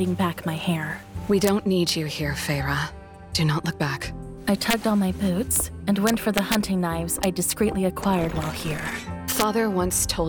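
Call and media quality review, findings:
Integer overflow: violent cracks on loud peaks at 1.44–1.48 s, 1.89 s, 4.70–4.73 s, 5.56 s, 6.07–6.55 s, 7.23 s and 9.40–9.43 s. Probable component: fixed-point gain or mixing stage without saturation. Peaks exceeding full scale by about 0 to 2 dB wrap to the opposite sign instead of limiting, so each overshoot jumps across the whole range. Much harsher than clipping. Longest run at 6.07–6.55 s.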